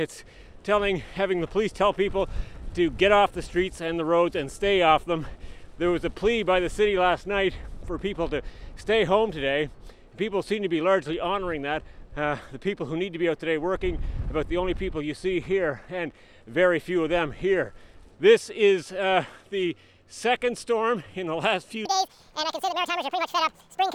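A playback or editing stage likely ran this last stretch against the wrong clock, so from 21.85 s to the end at 23.94 s the audio comes out as a section at the wrong speed. It plays 1.84 times faster than recorded, and because speed and pitch are tied together, everything jumps up by about ten semitones at once. The change is abrupt rather than gradual, leaving the final two seconds sounding squeaky, compressed in time and hurried.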